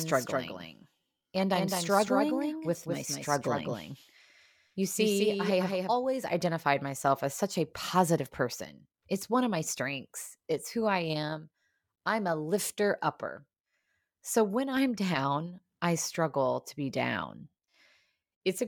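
Speech clip with a doubled audio track from the very start until about 5.98 s, just before "identified myself as such". A second full-band copy trails the original by roughly a fifth of a second, only a few dB quieter, with no decay or room colour, so it sounds like a clean slapback rather than an echo. It then cuts out abruptly. The likely cause is the same signal being picked up a second time through a slower path.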